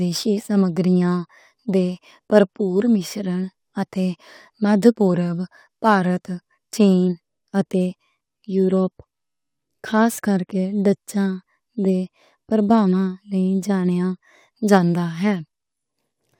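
Crude rate conversion runs throughout this speech recording. Samples were simply repeated rather than filtered, consistent with a 44.1 to 48 kHz change, leaving a gritty, inharmonic fizz roughly 30 dB below the speech.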